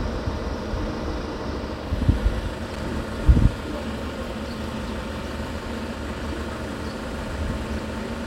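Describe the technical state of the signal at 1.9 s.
At 1.9 s the signal is intact, with no technical fault present at that moment.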